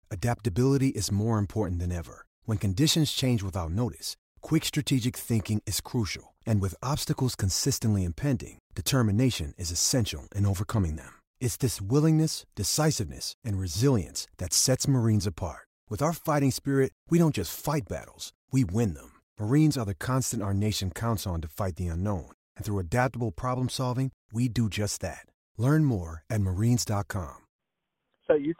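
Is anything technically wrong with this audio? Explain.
No, nothing in this speech recording stood out as a technical problem on listening.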